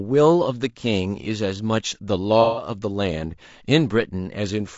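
Throughout, the speech sounds rough and grainy, with noise between the harmonics and a dulled top band. This is likely low-delay AAC compression, which fits about 32 kbps.

From 2.42 to 2.68 s, AAC frame loss with concealment leaves a smeared, noisy patch. The decoder patches over roughly 150 ms of missing audio with reused spectrum.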